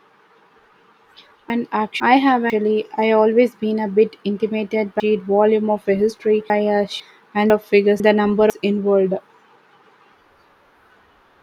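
Chunks out of order at 1.5–2.5 s, 5.0–7.0 s and 7.5–8.5 s. Half-second chunks play late, by one, three, then one chunk. Each jumbles the speech briefly.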